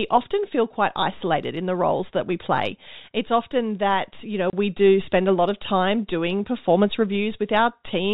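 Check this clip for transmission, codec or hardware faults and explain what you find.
There is one transmission fault: a packet loss filled with silence. From 4.50 to 4.53 s the speech drops out completely for 30 ms. The gap points to a single lost packet. The receiver had nothing to play, so it inserted silence. The gap has abrupt edges on both sides. The G.711 telephone coding caps the band at 4 kHz, and any quantisation noise is faint at most.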